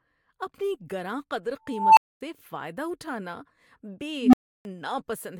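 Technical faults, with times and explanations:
1.68–2.21 s and 4.19–4.65 s, unstable filter: a tone near 1 kHz after "اپنی گراں قدر" swells over about 0.28 s into a clipped squeal, and later a lower one near 300 Hz swells over 0.14 s. A recursive filter with bad coefficients fed its output back until the values overflowed, leaving silences of 0.24 s and 0.32 s before it reset.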